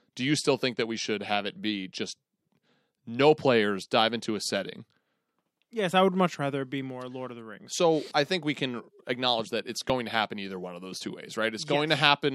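Speech, with audio missing between chunks: the recording was likely split into 4.0 s blocks, losing a sliver of roughly 15 ms at each handover. The join butts together with no gap, giving small skips at 5.91 s, before "I would much rather", and at 9.90 s, between "can acknowledge that it's" and "to happen either one".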